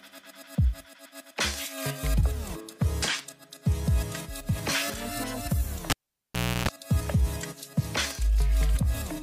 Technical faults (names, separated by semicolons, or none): cable pulled and plugged in